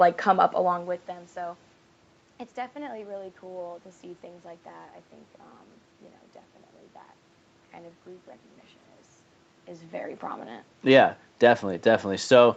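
No faults are audible anywhere in this speech recording.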